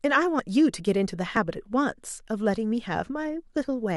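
At 0.40 s and again at 1.37 s the speech jumps forward. There's no gap, just a hard splice. Those are likely dropped buffers from an overrun: the recorder didn't collect its samples in time, so about 20 ms, then roughly 10 ms, simply vanished.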